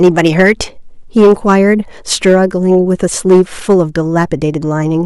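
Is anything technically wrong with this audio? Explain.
Yes. The speech has hard clipping in four bursts: 0.03 to 0.52 s, 1.17 to 1.61 s, 2.12 to 2.75 s and 3.30 to 3.81 s, overdriven by about 5, 7, 3 and 6 dB. Peaks exceeding the stage's ceiling are sliced flat, spraying high harmonics as crackly fuzz. Unlike soft saturation's rounded warmth, the edge is abrupt and gritty, harshest in the second burst.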